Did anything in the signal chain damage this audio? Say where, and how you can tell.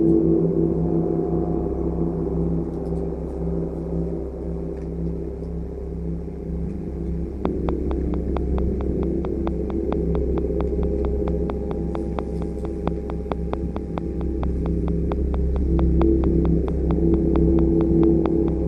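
Yes. The first fault runs through the whole clip: an overlap-add ripple in a frame-based processing stage, such as call processing or a codec. The level pulses at around 100 Hz with a depth of about 11 dB, giving a metallic buzz with extra tones around each note. The pulsing tracks the frame rate. Frames were windowed and re-summed with an overlap whose window gains do not add to a constant, so each frame boundary leaves a dip in level.

From 7.45 s to 18.49 s a train of clicks sits on top of the sound. There are about fifty near-identical pulses, evenly spaced at 4.44 per second and peaking about 15 dB above the signal. They continue through quieter stretches, so they are not a product of the audio content. Regular pulses like these are likely interference coupling into the analogue wiring or a struggling interface injecting a periodic glitch.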